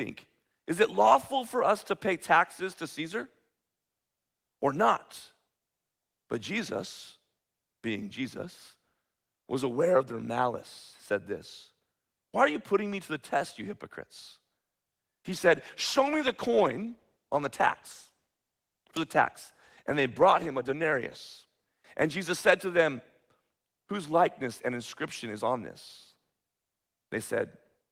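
From 15.3 s to 22.81 s the speech turns rough and watery: a call bitrate drop. The call's bandwidth estimate fell, so the encoder coded the signal far more coarsely, which fits a fall from 32 kbps to about 18 kbps, with the worst stretch lasting about 5.7 s. On a spectrogram the upper band thins out and the harmonics look smeared. The waveform envelope stays similar, and full detail returns as the bitrate recovers.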